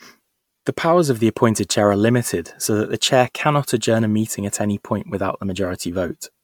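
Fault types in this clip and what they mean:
Generation loss: throughout, the speech sounds swirly, hollow and smeared, with blurred attacks and nothing above 19.9 kHz, likely from about ten successive MP3 re-encodes compounding quantisation damage.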